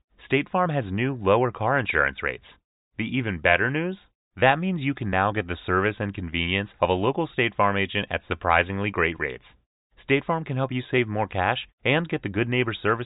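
No technical faults can be heard anywhere in the speech recording, and the signal holds steady throughout.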